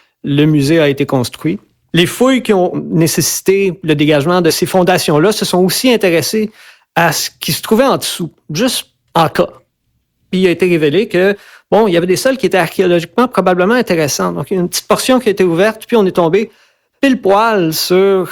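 Crackle on the loudest peaks of the speech runs throughout: hard clipping, with the signal overdriven by about 6 dB, so under one percent of samples are cut flat.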